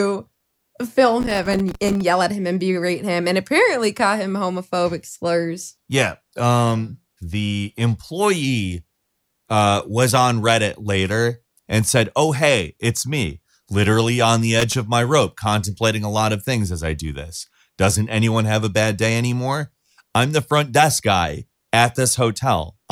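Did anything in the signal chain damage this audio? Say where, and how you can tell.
Yes. Two irregular bursts of loose connector crackle, from 1.20 to 2.01 s and from 14.59 to 14.74 s, place the damage in the analogue wiring. A worn or dirty contact was rapidly making and breaking, chopping the speech signal into scratchy, uneven crackle.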